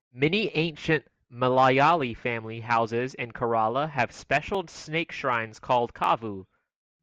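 Periodic USB or driver dropouts interrupt this speech recording from 4.55 to 6.54 s. Every 0.5 s a couple of milliseconds is skipped, leaving about five evenly spaced ticks.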